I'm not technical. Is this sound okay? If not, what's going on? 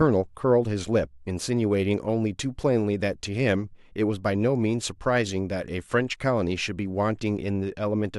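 Yes, nothing stood out as a problem when listening to this recording.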